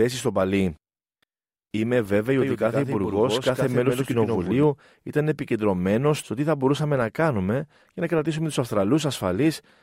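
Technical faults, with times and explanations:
2.41 to 4.63 s, doubled audio track: The speech is heard twice. A second full-band copy trails the original by about a tenth of a second and sits about 5 dB lower. The copy is dry, with no decay or room colour, so it sounds like a hard slapback. It cuts in and out abruptly, ending just before "ήταν επικεντρωμένο στο τι". The likely cause is the same signal arriving again through a slower path.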